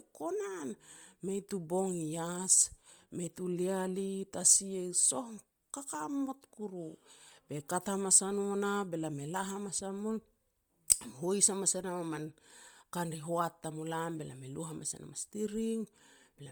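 Throughout the speech, the upper frequencies sound grainy and breathy rather than clean. The damage is heavy. This is likely Bluetooth LC3 compression, the LE Audio transform codec. At low bitrates it discards much of the upper spectrum and refills those bands with shaped noise. The coarseness here fits a rate around 32 kbps with 10 ms frames. The band still reaches about 20.1 kHz.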